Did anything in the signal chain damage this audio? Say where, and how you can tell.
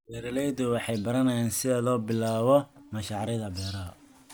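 No, nothing along the chain has left an audible mark on this speech, and the signal holds steady and continuous with no stage pointing to damage.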